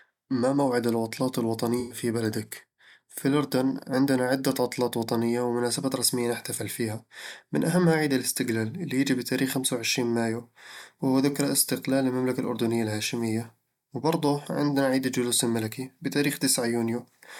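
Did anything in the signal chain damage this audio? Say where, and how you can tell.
Yes, at the codec stage: AAC frame loss with concealment. From 1.80 to 1.98 s, between "ما موعد العطلات" and "بلدك في الأردن عندنا", the speech smears into a noisy patch. The decoder rebuilt about 107 ms from the last good spectrum. That fits five lost frames.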